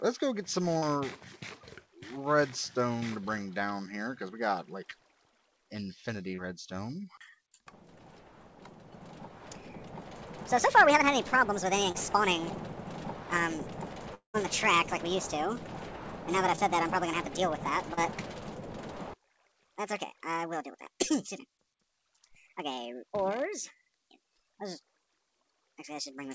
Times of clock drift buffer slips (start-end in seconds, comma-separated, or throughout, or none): none